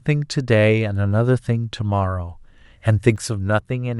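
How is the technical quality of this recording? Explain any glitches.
The recording has one glitch, a sudden gain jump near the end. At 3.16 s the level of the speech drops abruptly by about 4 dB and stays at that lower level until the end of the clip. The background noise falls by the same amount at the same instant, so the step sits in the signal chain rather than in the speaker's delivery. The cause is likely a digital gain change applied from one sample to the next with no ramp.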